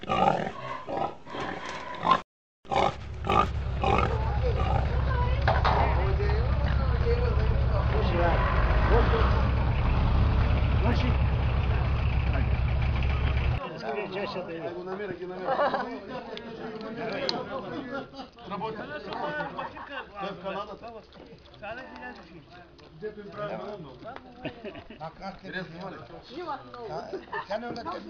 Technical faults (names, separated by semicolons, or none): dropped samples